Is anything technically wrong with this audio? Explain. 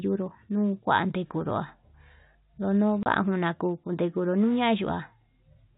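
Yes. From 3.03 to 3.06 s the speech drops out for 30 ms. This is packet loss filled with silence. A packet went missing, and the receiver played nothing in its place. The gap's length fits one lost packet. Its edges are hard. The narrow G.711 telephone band stays audible throughout.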